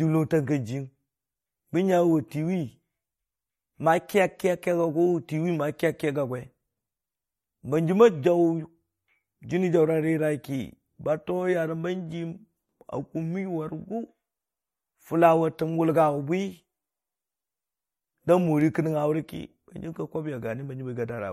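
Throughout, the speech sounds watery, with nothing above 16.4 kHz, likely MP3 compression at a low bitrate; spectrograms show a flat ceiling and flickering holes.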